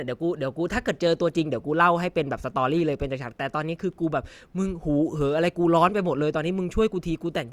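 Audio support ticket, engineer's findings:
No faults found in this speech recording; nothing to report for the ticket.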